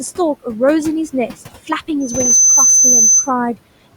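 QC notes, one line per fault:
throughout: noise suppressor artifacts, steady background pulled down by about 16 dB frame by frame, so residual room noise dips between phrases and resurfaces under speech.
2.00–3.32 s: loudspeaker feedback squeal, a 6.1 kHz tone swelling over roughly a third of a second to around 10 dB above the speech as the mic-speaker loop exceeds unity gain.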